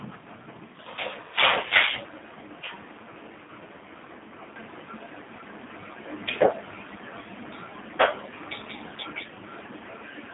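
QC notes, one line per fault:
Throughout, G.729 codec: band held to 200 Hz to 3.7 kHz, nothing above 3.8 kHz, and a plainly rough, synthetic grain from pulse-rebuilt speech, fitting 8 kbit/s.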